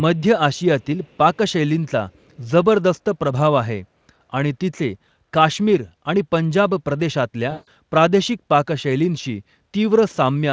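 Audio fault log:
0.54, 0.81, 1.03, 1.34 and 2.09 s (to 2.5 s): echo leak, faint scraps of speech delayed 437 ms at about 40 dB down, likely from residual loudspeaker pickup; spectrogram shows weak repeated harmonic traces.
7.51 to 7.68 s: VoIP packet loss concealed by the speech codec, a 160 ms gap filled by extrapolated buzzy tone or coloured noise that fades; waveform shows a decaying extrapolated signal.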